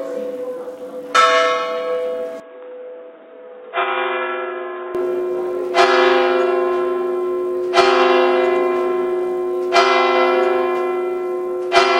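Sound recording. From 2.4 to 4.95 s it abruptly turns dull, capped at 3.8 kHz, a few decibels quieter, with added noise: likely an input switched to a poorer device.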